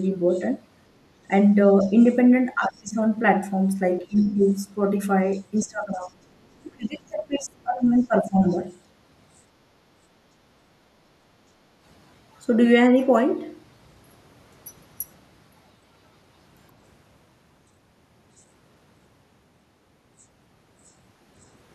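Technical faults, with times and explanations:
0.03–0.45 s, 1.79–2.82 s, 4.16–6.09 s, 7.96–8.57 s: other side's voice leaking through. A faint second voice, roughly 35 dB below the talker, is audible, likely residual loudspeaker echo the canceller failed to remove.
1.28–2.98 s, 4.01–4.39 s, 5.59–8.43 s: speech suppressed in double talk. The talker's level dips, by up to about 30 dB, while the far side speaks, likely the canceller attenuating both voices together.
11.55–11.75 s: background gated by the echo canceller. Room sound drops briefly by about 6 dB for roughly 150 ms, then returns as the canceller releases the microphone.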